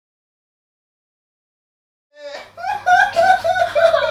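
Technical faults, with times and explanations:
No technical faults found.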